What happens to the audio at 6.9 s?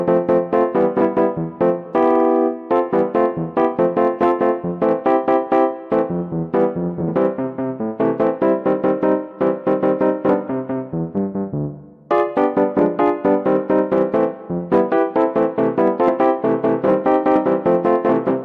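Nothing goes wrong at 6.9 s: the audio plays through that moment intact, with no dropout, click, glitch or other technical fault.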